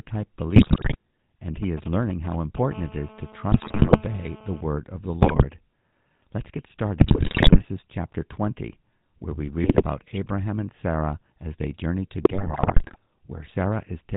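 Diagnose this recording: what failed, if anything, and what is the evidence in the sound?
Codec stage: GSM full-rate codec coding is audible across the whole speech recording. The band stops at 4 kHz, and the voice has a buzzy, gravelly edge. That texture comes from a coarse pulse-train excitation driving a vocal-tract filter, which fits the 13 kbps full-rate coder.

Network stage: GSM bit errors corrupt the decoded speech at 0.56–0.96 s, 3.52–4.02 s, 5.22–5.43 s, 7.0–7.65 s, 9.62–9.83 s and 12.22–12.96 s. In each span the voice squawks, pops and gargles. Flipped bits reached the decoder's filter, pitch and gain parameters, which bent the spectrum and threw the level off frame by frame.

Analogue wiring: GSM signalling bursts run from 1.63 to 2.74 s as a galloping dit-dit-dit of short buzzes near 217 Hz, around 10 dB below the speech. A nearby 2G handset was sending grouped radio bursts, and the audio circuitry rectified them into the signal path.

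Analogue wiring: GSM phone buzz follows directly from 2.74 to 4.61 s. It is a steady, hard, harmonic-rich rasp at 217 Hz, about 18 dB below the speech and unrelated to it. This is a nearby 2G handset in call mode, pulsing continuously at its frame rate, with the bursts rectified into the audio.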